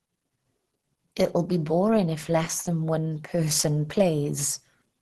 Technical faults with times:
0.00-5.01 Opus compression

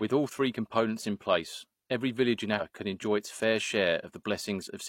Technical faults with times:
2.56-2.61 compressed frames skipped

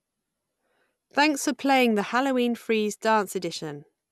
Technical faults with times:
none

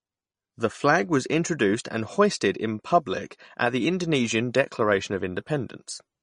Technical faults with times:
0.00-6.22 MP3 compression

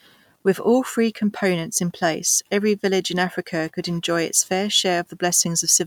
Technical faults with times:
none

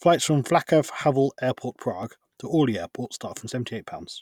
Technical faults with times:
1.01-4.08 periodic USB or driver dropouts

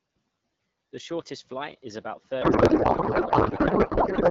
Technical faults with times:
2.42-4.30 codec payload misread

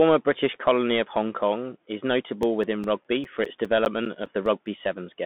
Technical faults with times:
0.00-5.26 Bluetooth CVSD headset codec
2.43-4.66 CD scratch ticks

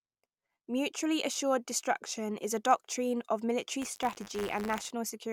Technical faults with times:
3.81-4.90 buffer tearing

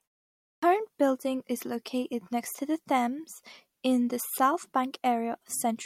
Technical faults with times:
0.39-0.62 clipped start after a pause

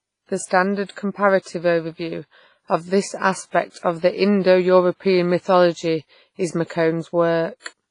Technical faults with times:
0.00-7.91 WMA compression

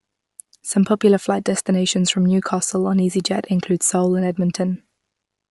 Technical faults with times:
0.00-5.50 Bluetooth LC3 compression
3.62-5.12 sample clock jitter

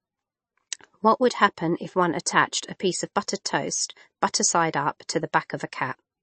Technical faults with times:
0.00-6.22 MP3 compression

